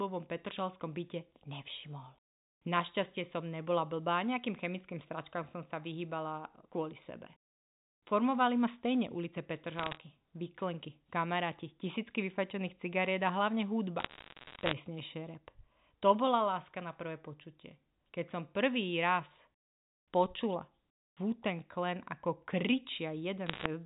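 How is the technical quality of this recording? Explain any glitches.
The recording is a telephone-band speech signal, cut off above 4 kHz as expected for G.711 coding, and it has three short bursts of bit errors on a digital phone line. The first runs from 9.76 to 9.97 s, after "ma stejne ulice" and before "výklenky kamaráti tisícky vyfačených". The second runs from 14.00 to 14.73 s, after "vyfačených cigariet a hlavne". The third runs from 23.46 to 23.66 s. During each burst, roughly one bit in a hundred, or slightly fewer, arrives flipped. Because each G.711 byte is one logarithmic sample, a corrupted sign or high-order bit throws that sample far from its neighbours. That sudden jump is heard as a sharp tick, and the clustered ticks form a crackle over speech that is itself undistorted.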